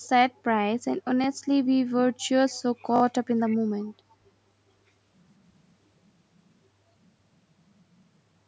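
Speech, with two kinds of fault. The first is an echo leak. Faint, delayed scraps of the speech sound at 2.49 to 2.62 s, 3.47 to 3.57 s and 4.1 to 4.15 s. Each trails the original by about half a second. They sit far below the direct speech, quietest in the last one. The likely cause is a far-end loudspeaker whose echo canceller let some of its microphone pickup return down the line. The second is a repeated buffer at 2.96 to 3.02 s. One short slice plays four times in a row, with a hard join at each restart. It is heard as a quick stutter or brief buzz. The slice length fits a 20 ms buffer. The player ran out of fresh audio and looped the last block until new data arrived. Little or no audio is lost, but the rhythm catches for a moment.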